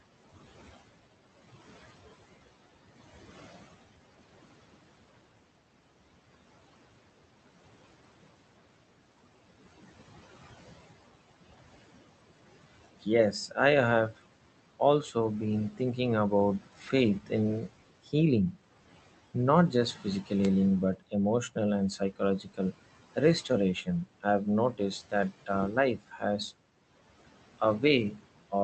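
A noise suppressor runs throughout, pulling the steady room noise down by about 17 dB frame by frame. These are noise suppressor artifacts: the residual noise dips in the gaps and swells back under the speech.

From 13.02 to 13.57 s, speech is cut by the noise suppressor. It mistakes soft speech for noise and attenuates it by up to about 11 dB, for well over a tenth of a second in total, so it sounds swallowed. The same happens briefly at 15.71 to 15.80 s (about 11 dB) and again across 16.6 to 18.55 s, where roughly a third of a second of quiet detail drops by up to about 14 dB.

At 20.42 to 20.47 s a wireless microphone noise hit occurs. The radio link fades for a moment as reflections cancel, and receiver noise surges up. It comes through as a short swish of static, around 50 ms long.

The suppressor then bites hardest. Between 20.96 and 26.22 s, soft passages adding up to under a second are pushed down by up to about 17 dB and go faint. 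From 27.59 s to the end, speech drops by up to about 15 dB and sounds faint.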